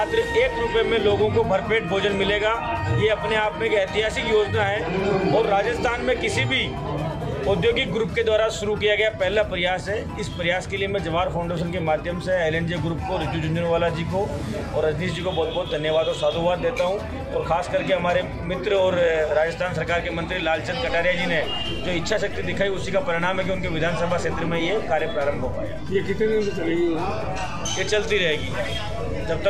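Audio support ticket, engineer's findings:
DC step at 20.89 s: single low thump, sound continues unaffected. Zero line jumps by about -31 dBFS and holds to the end. Waveform shows baseline shifted off centre. Spectrogram shows a brief low-frequency smear at the step, then steady energy at 0 Hz. Probable converter recalibration or an offset input being switched in.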